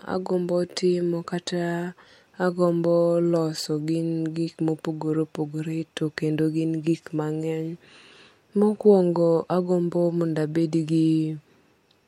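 Nothing in this speech recording stands out as a technical fault; the audio carries on without any problem worth pointing to.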